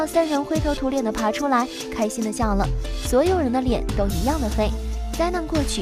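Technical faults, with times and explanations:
No technical faults can be heard in the signal at any point.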